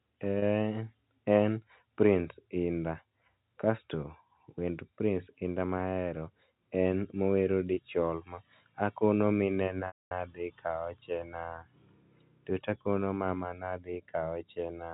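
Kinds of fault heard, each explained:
packet loss with pitch repetition: Short buzzy holds at 0.39 s and 7.74 s (just after "mahero en mowero"), each about 30 ms, then a 240 ms gap at 9.87 s that fades toward silence before "nadhi kaochena". The receiver repeated the last pitch period to cover lost packets.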